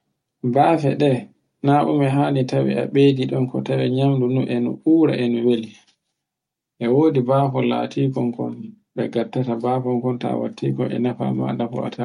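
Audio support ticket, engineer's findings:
No faults found in the audio on this ticket.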